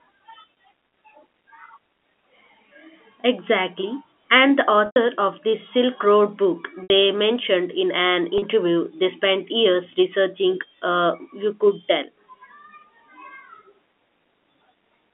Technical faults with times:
4.86-4.96 packet loss with pitch repetition
6.83-6.90 packet loss with pitch repetition
8.38-8.42 packet loss with pitch repetition

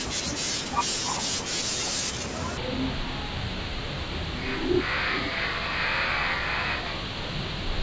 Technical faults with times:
2.57-7.83 wrong sample rate

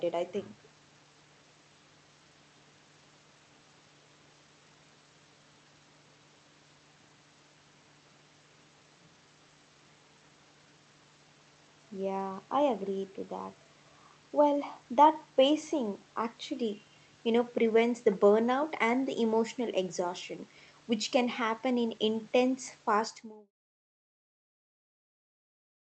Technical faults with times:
none

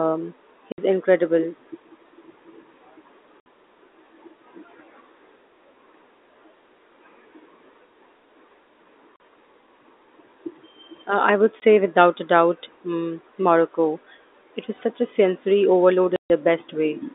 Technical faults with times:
0.72-0.78 packet loss filled with silence
3.40-3.46 packet loss filled with silence
9.16-9.20 packet loss filled with silence
11.60 packet loss filled with silence
16.16-16.30 packet loss filled with silence

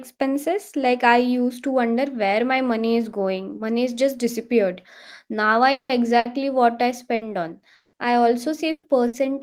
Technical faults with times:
5.71-5.92 long network dropout
6.19-6.28 burst of packet loss
7.15-7.24 burst of packet loss
7.75-7.96 long network dropout
8.71-9.16 burst of packet loss

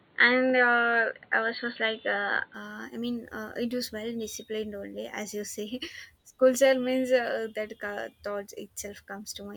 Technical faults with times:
0.00-2.54 input switched to a poorer device

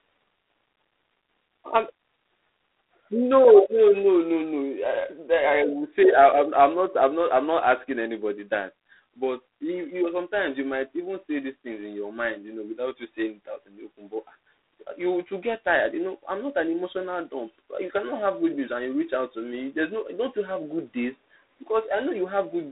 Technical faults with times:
0.00-22.72 G.726 ADPCM

